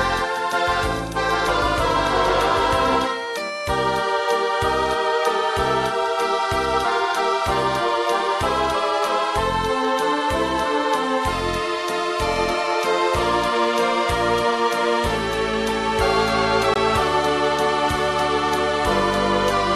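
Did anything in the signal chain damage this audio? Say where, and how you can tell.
Yes, two spots. From the very start until 2.96 s there's a doubled audio track: a full-band copy about 5 dB down trails the original by roughly 0.7 s, dry, with no room colour, then cuts off abruptly. It's likely a second, slower capture path or an edit holding two offset copies.

Then at 16.74 s there's a gap at a join of encoded pieces, a hole of 19.5 ms with smeared edges, after which the sound picks up where it stopped. That's a codec/storage join: separately encoded chunks spliced without trimming encoder delay and final-frame padding.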